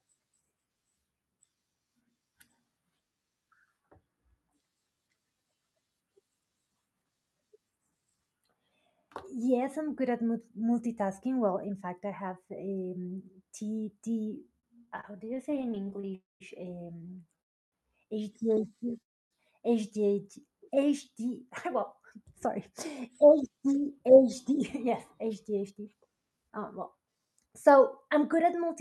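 Speech carried over a call link, with its spectrogram content ending near 12 kHz, which fits the Opus codec's band limit, shows repeated stalls (stutter) from 14.59 to 16.13 s. The jitter buffer ran dry over and over, and the receiver stretched the last sound through each gap, up to 38 ms long, so roughly a fifth of that span is filled-in audio. On a waveform this looks like short smeared repeats breaking the syllable envelopes. Three call audio freezes follow, at 16.15–16.42, 17.41–17.74 and 19.02–19.33 s, likely from packets held up in transit. In each, the last sound buzzes briefly and fades, then a flat silent stretch of about 0.17, 0.30 and 0.28 s appears as a blank vertical band before the speech resumes with nothing lost. From 21.43 s to 28.70 s a jitter buffer speed-up runs the audio at 106% speed, at the same pitch, trimming roughly half a second of pitch-period slices to shed the built-up delay. 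Spectrogram harmonics stay level while syllables sit closer together, and the speech sounds hurried.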